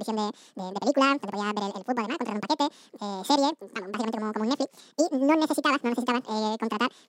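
The audio was read two samples at a time (double speed) throughout this speech recording: the reader treated each pair of samples as a single frame, as if the stream held two channels or samples twice as wide. Every stretch of sound therefore passes in half the time, running at 2x speed and 12 semitones, a full octave, higher.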